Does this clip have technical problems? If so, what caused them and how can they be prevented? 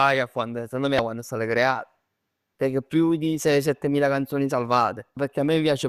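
Yes, there's damaged data in a compressed stream: short glitches at 0.96–0.99 s, right after "secondo me", and at 5.14–5.17 s, where the decoder hit corrupt frames and lost sync. Checksummed transfers and error-checked storage would prevent it.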